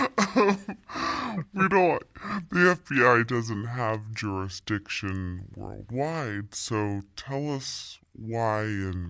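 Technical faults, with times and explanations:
Throughout, wrong sample rate: the speech runs at about two-thirds of its natural speed and sits about 7 semitones lower, so voices sound heavy, slow and dragged. Speed and pitch fall by the same ratio, which fits 24 kHz audio being played back at 16 kHz without conversion. That linkage separates it from a time-stretch, which slows speech but keeps pitch, or a pitch shift, which lowers pitch but keeps timing.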